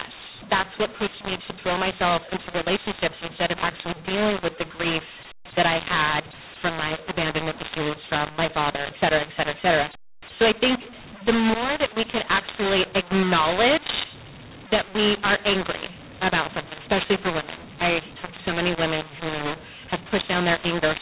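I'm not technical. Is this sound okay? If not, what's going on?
No, it isn't. Throughout, the speech sounds harsh and gritty, and the pauses hiss instead of falling silent. It was saved as mu-law telephone audio but played back as A-law, a case of mu-law and A-law mixed up, so loudness levels come out scrambled and near-silent moments get pushed up into noise.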